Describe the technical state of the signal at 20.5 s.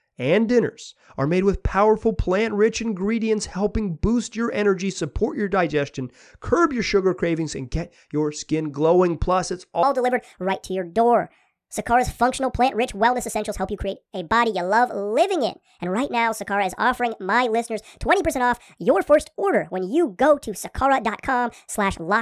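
At 20.5 s the speech runs fast and high-pitched, about 1.45 times normal speed and roughly 6.45 semitones sharp, the hurried, chipmunk-like quality of a wrong sample rate. The fault runs from 9.83 s to the end of the clip. The samples are being played out faster than they were captured, with no rate conversion, so timing and pitch rise together by the same ratio. That ratio fits audio recorded at 22 kHz being played back at 32 kHz.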